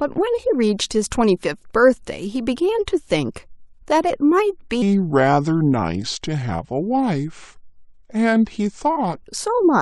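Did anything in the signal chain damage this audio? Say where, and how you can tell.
Yes. From 4.82 to 9.16 s the speech runs at 0.788 times its proper speed, which is a section at the wrong speed, likely from a playback or resampling stage clocking it at the wrong rate. Pitch drops about four semitones with it, so everything turns deep and slow.

From 9.48 s to the end, one channel arrives a fraction of a millisecond late and is then summed to mono, a channel delay producing comb filtering, probably at the converter or driver. Fixed notches starting around 3 kHz make the speech sound hollow and phasey.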